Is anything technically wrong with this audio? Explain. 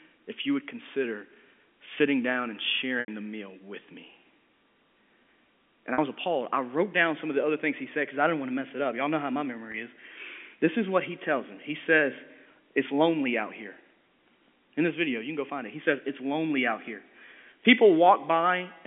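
Yes, there is packet loss with pitch repetition at 3.0 s (80 ms), 5.94 s (40 ms) and 9.72 s (20 ms) within the telephone-band G.711 sound. The receiver repeats the last pitch period to fill each gap, giving a held, buzzy tone instead of the silent hole of a plain dropout. The 80 ms loss fades toward silence before the sound returns.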